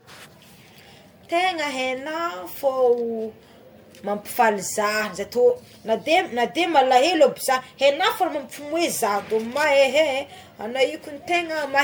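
Speech clip with generation loss throughout: the sound is swirly, hollow and smeared, with blurred consonant onsets, likely from being re-encoded around seven times at a setting that fits 96 kbit/s MP3. A spectrogram shows accumulating holes and grainy patches below a 20.1 kHz ceiling.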